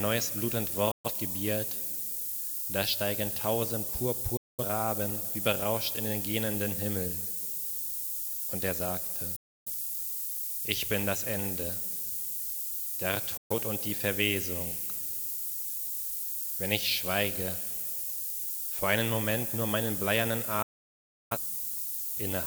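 Throughout, low bit depth with noise shaping: only five bits, with rounding error pushed upward into a steady hiss climbing toward the treble, roughly as loud as the sound itself, not flat like broadband noise.

Digital broadcast dropouts at 0.91, 4.37, 9.36, 13.37 and 20.62 s mute the audio behind an 8 ms fade for 0.17 to 0.76 s. The missing material is simply gone rather than repeated, unlike a buffer stutter.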